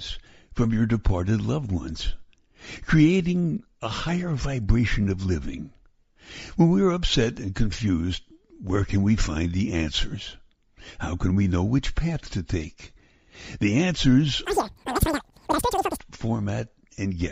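From 14.45 to 15.98 s the sound races at three times normal speed and jumps about 19 semitones higher, a wrong sample rate that fits 16 kHz audio being played at 48 kHz.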